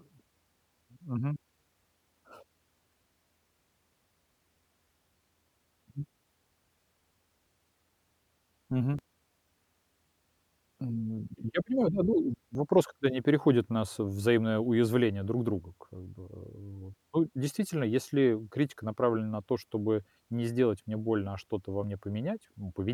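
Small forward jumps in the speech land at 8.99 s, 12.55 s and 21.84 s, each skipping roughly 10 ms, 20 ms and 10 ms of sound. These are likely a dropped buffer (overrun), where samples were overwritten before collection and the edges spliced together.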